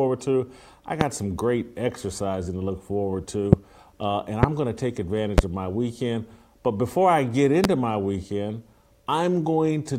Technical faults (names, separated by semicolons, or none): loud pop